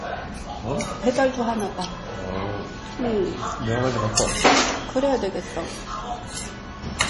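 Everyday sounds here, and the whole clip carries heavy damage that's most likely from MP3 compression. Nothing gets through above about 11.3 kHz, so the top end is sliced off flat. The fainter detail has that watery, swirly quality you get when weak frequency components keep dropping in and out between frames, and sharp onsets come out smeared. That level of damage fits a bitrate of around 32 kbps, where the encoder simply runs out of bits.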